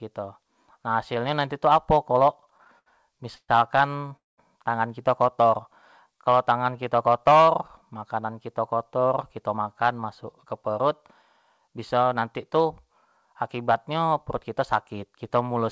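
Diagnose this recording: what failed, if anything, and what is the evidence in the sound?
Network and jitter buffer: repeated stalls (stutter) from 2.46 to 3.50 s. Nine gaps are filled with held sound, about 265 ms in total. The longest is 129 ms. Late packets kept emptying the buffer.

A short stall from a late packet follows at 4.08 to 4.13 s. One sound is held for 21 ms, then playback resumes where it stopped.

A call audio freeze runs from 4.17 to 4.40 s. The sound fades and goes silent for 190 ms. The likely cause is held-up packets draining the buffer.

A jitter buffer slow-down runs from 5.42 to 7.10 s. Playback drops to 93% speed at unchanged pitch, adding 128 ms to rebuild the reserve.

A jitter buffer speed-up runs from 8.91 to 10.88 s and from 11.58 to 12.87 s, at 107% speed. Each pass trims pitch periods, about 150 ms and about 100 ms, to cut excess delay.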